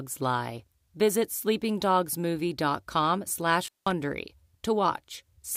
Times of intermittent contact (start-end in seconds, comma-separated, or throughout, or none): 3.63-3.92